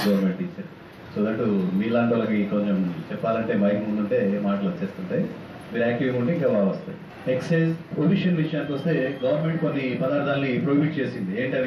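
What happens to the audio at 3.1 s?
Nothing goes wrong at 3.1 s; the audio plays through that moment intact, with no dropout, click or distortion.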